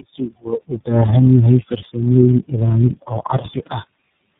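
From start to finish the speech carries tandem speech coding: it sounds like roughly four low-rate speech codecs in a row, likely GSM full rate, G.723.1 and iLBC, each re-encoding the last one's damage. Everything above 3.7 kHz is gone, leaving it muffled, rough and warbly.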